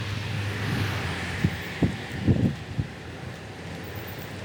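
Wrong sample rate throughout this recording of sounds: everything runs at double speed and sits a full octave, 12 semitones, too high. The samples are being played without conversion at roughly twice their recorded rate, which fits audio captured near 22 kHz played back at 44.1 kHz.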